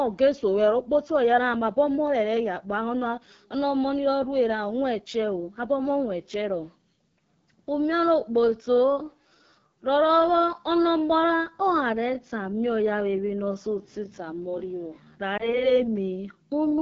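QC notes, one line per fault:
Throughout: AMR wideband (HD Voice) codec. The speech carries plainly audible coding damage, a rough, raspy edge that fits a low rate of about 8.85 kbit/s. On a spectrogram, energy stops cleanly near 6.4 kHz, with a thin, smeared noise band filling 6.4 to 7 kHz.
7.68 to 16.8 s: time-stretched section. From 7.68 s the pace drops abruptly to about 0.73 times speed while pitch holds steady, leaving the speech dragging, likely from software stretching to fit a length. A spectrogram shows elongated, repeated fragments and blurred onsets.
15.37 to 15.68 s: lost AMR speech frames. Within this stretch one 20 ms frame drops out, and the decoder fills it from the last good frame with falling gain. That gives a brief dip or warble. The waveform shows a short amplitude sag, and the spectrogram a momentarily frozen, fading harmonic pattern.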